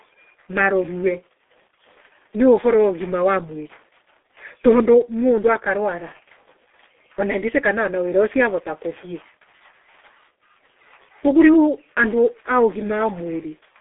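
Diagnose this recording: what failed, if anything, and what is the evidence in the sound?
Heavy G.723.1 codec compression, consistent with about 6 kbit/s, strips everything above 3.8 kHz throughout, leaving the speech muffled and hoarse with smeared consonants.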